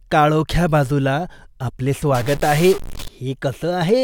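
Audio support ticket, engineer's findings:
Stuck bit, 2.15 to 3.08 s. Likely a data line or converter output latched at a fixed state, so one bit ignores the signal. Step size around -25 dBFS, which points to a fairly high-order bit. About half the samples are off by that amount in a waveform-dependent pattern, giving harsh, buzzy distortion on the speech. Near-silent stretches fill with loud noise as small values cross zero.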